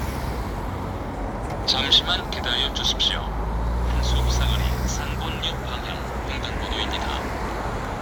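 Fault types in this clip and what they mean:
No technical faults are present: the signal stays continuous and stable throughout, with no audible disturbance in the recording path.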